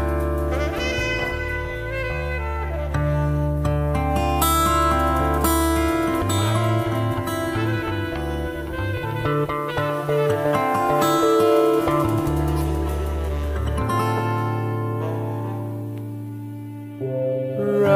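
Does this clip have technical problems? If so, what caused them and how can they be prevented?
No, the signal shows no technical faults at any point, so there is nothing here that needs preventing.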